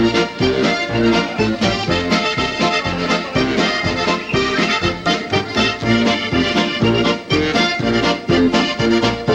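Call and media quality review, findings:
Nothing stood out on listening to this audio; no findings to log.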